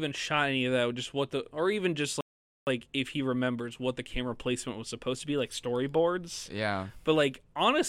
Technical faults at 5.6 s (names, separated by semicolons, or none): none